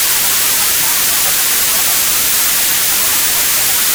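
From the very start to the end, the whole clip is hit by hard clipping. The sound is driven about 11 dB past what some stage in the chain could pass, so its peaks get sliced flat, and nearly a third of the waveform ends up sitting on that ceiling. Those squared-off tops throw harmonics well up the spectrum, which is why every loud moment in these everyday sounds comes across as a harsh, gritty fuzz rather than the occasional crackle.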